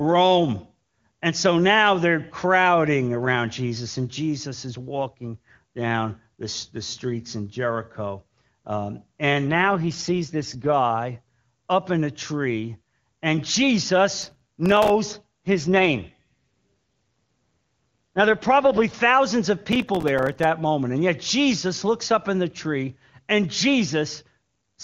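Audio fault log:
9.50 to 10.73 s, AMR rate drop: the link falls from 23.85 to 8.85 kbit/s and the speech turns rough and synthetic, with the bandwidth unchanged and no gap.
14.22 to 14.90 s, processor overload crackle: around thirty tiny buffers miss their deadline, each dropping to silence with hard edges, which fits buffers of about 3 ms. Together they sound like gritty tearing.
15.47 to 18.94 s, AMR rate drop: the rate again falls from 23.85 to 8.85 kbit/s, giving a longer stretch of raspy, synthetic speech until the rate recovers.
19.72 to 20.44 s, processor overload crackle: a second burst of roughly thirty missed short buffers, each a hard-edged silent gap, heard as crackle riding on the speech.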